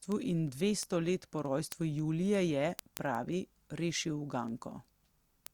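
From 0.12 s to 5.47 s the speech carries word clock ticks: a receiving device running on its own clock, mismatched by around 200 ppm, slips one sample at each clock crossing, giving dozens of clicks at a steady rate of roughly one every tenth of a second.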